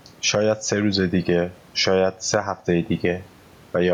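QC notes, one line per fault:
Throughout: gain pumping, the gain swings around 10 dB, pulled down under loud syllables, likely excessive mic gain driving a fast limiter.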